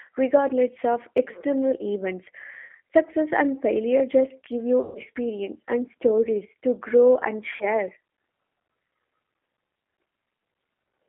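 G.729 codec, throughout: the speech is confined to a line band of about 250 Hz to 3.4 kHz and rebuilt from a vocal tract filter, a pitch predictor and a few pulses per frame, a low-rate rebuild that fits 8 kbit/s, so it sounds plainly rough and synthetic.

VoIP packet loss concealed by the speech codec at 2.65 s after "regardless of external events", 4.81 s after "and failure just give" and 7.56 s after "stories to grow and": the decoder extends the last sound through gaps of 40, 140 and 40 ms, leaving a buzzy tone or coloured noise that fades, then weak or distorted speech as it recovers.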